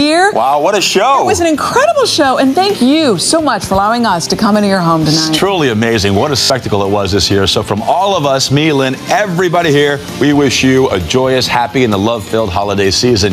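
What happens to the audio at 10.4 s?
At 10.4 s the gain is pumping, with the level swinging by roughly 10 dB, and the whole thing sounds squashed, loud and soft parts pressed close together. This gain pumping runs through the entire clip, not just this moment. The likely cause is input gain set far too high, with a fast limiter or compressor clamping down on every peak and releasing in the gaps.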